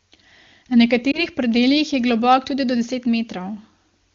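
At 1.11 to 1.26 s, lost AMR speech frames cause a brief dip or warble. It fits a single dropped 20 ms frame concealed by reusing the last good settings.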